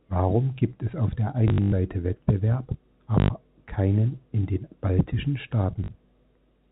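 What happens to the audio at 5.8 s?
At 5.84 s the call path drops audio packets, and from then until 5.88 s the receiver fills the 40 ms gap by replaying the last packet it got, which fits two lost 20 ms packets. This packet loss with last packet repeated produces a brief 50 Hz buzz, heard as a short robotic stutter within the telephone-band G.711 sound.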